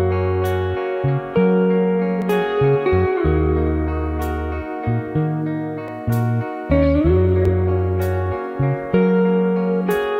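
Three sharp, isolated clicks cut through the audio, at 2.22 s, 5.88 s and 7.45 s, each showing up as a thin vertical line right across the spectrum. They sound like dropped samples: a tiny slice of the stream, about 0.7 ms, goes missing, so the waveform jumps straight to a later value. That's likely the cause here, and the gap is far too brief to swallow any actual sound, just that abrupt step you hear as a click.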